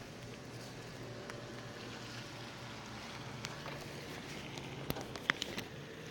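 Nothing goes wrong anywhere in this recording of sounds, so there's no fault to point to at any moment.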